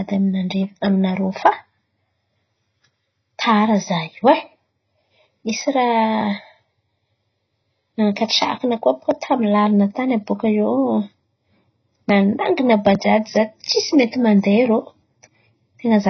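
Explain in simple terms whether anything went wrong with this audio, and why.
The speech sounds dull and muffled from start to finish, as if heard through a thin wall, with a watery warble and fizz around the s and sh sounds. Nothing is heard above about 6 kHz. The likely cause is heavy AAC compression: to make the file very small, the encoder threw away the upper frequencies and coded the rest so coarsely that gaps and swirling artefacts appear in the sound.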